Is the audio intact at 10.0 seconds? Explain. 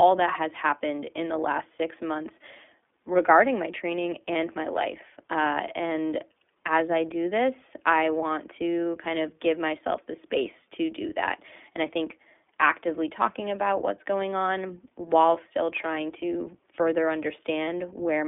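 No. At 10.0 s, as throughout, the speech carries iLBC codec damage: each short frame, consistent with 20 ms, is coded independently, leaving a band of roughly 250 Hz to 3.5 kHz, nothing above 3.7 kHz, and a plainly audible rough, synthetic texture.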